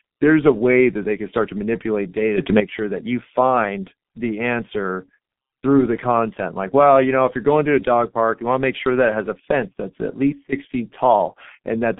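Speech, passed through the G.723.1 codec for its whole length. Nothing reaches above 3.8 kHz, and the band sits roughly between 150 Hz and 3.6 kHz. The damage is heavy. The voice is muffled and hoarse, and consonants blur. That fits a bitrate near 6.3 kbit/s.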